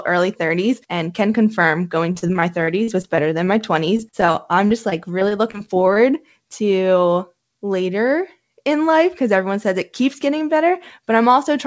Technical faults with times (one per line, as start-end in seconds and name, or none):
2.12-3.49 repeated packet loss (robotic sound)
3.97-5.98 repeated packet loss (robotic sound)